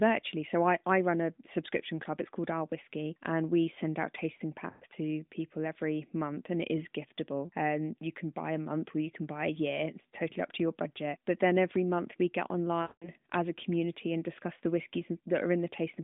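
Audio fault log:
4.70–4.85 s, lost AMR speech frames: after "we send out tasting", about 120 ms of sound smears and fades as the decoder repeats its last good parameters, consistent with six 20 ms frames lost. The voice returns faintly at "to people every month".
12.82–13.09 s, lost AMR speech frames: after "every month we get", a longer 200 ms dropout, fitting ten frames, stretches into a fading, drawn-out tone before recovering weakly at "as a community and".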